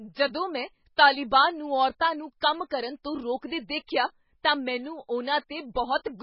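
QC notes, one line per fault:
Throughout, MP3 compression: nothing is heard above 5.5 kHz, so the speech sounds dull. Quiet detail flickers in and out, giving a watery swirl. Consonant attacks smear. The damage is heavy, likely from a very low bitrate around 16 kbps.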